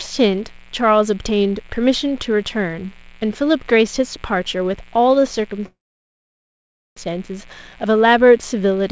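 Mains buzz runs throughout: spikes from the 60 Hz supply leak in, so a steady, raspy buzz sits well below the speech.

A call audio freeze from 5.66 to 6.98 s, likely from stalled packets emptying the jitter buffer, fades into 1.2 s of silence; speech then resumes intact, 1.3 s later.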